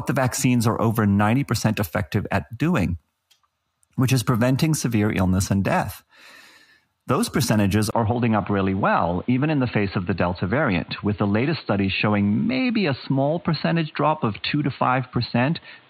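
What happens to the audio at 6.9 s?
Nothing goes wrong at 6.9 s; the speech carries straight through that moment without any dropout, click or other disturbance.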